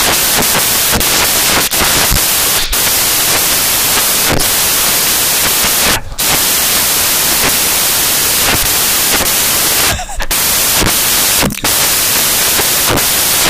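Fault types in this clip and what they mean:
Samples built from the wrong bytes: each sample is assembled from misordered or misaligned bytes, so the jittery low bits dominate and the speech becomes loud hiss for the whole clip. Spectrograms show broadband noise.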